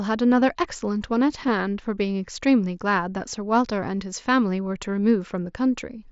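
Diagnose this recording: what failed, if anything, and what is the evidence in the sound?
Concealed Bluetooth headset packet loss occurred on the wireless link between headset and phone, at 0.41 s and 1.48 s. Each event lost a single 7.5 ms frame, and the receiver filled it by repeating the best-matching stretch of the preceding speech waveform, so the speech carries on through each gap with only a faint seam. A buffer underrun or plain dropout would instead leave a silent hole or a click. The mSBC wideband coding around these points sounds as expected.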